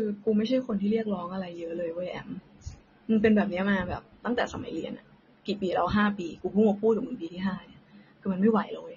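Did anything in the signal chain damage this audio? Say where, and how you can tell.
Yes. The damage is at the codec stage and runs through the whole speech clip: the top end is dull and sibilants turn fizzy and warbling. That is the signature of AAC compression, likely AAC-LC at a bitrate around 24 kbps, lowering the cut-off and leaving spectral holes.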